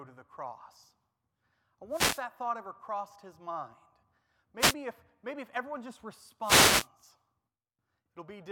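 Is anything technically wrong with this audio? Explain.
Yes. Three wireless microphone noise hits interrupt the speech, at 1.9 to 2.23 s, 4.59 to 4.75 s and 6.41 to 6.88 s. The analogue FM radio link dropped in strength as reflected paths cancelled the direct signal, so the receiver's own noise climbed. Each is heard as a brief swish of static, the last one longest at nearly half a second.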